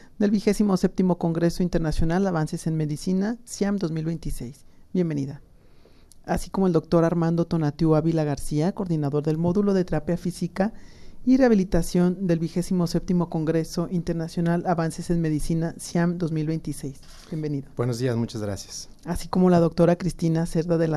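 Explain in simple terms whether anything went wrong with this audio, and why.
Nothing went wrong here.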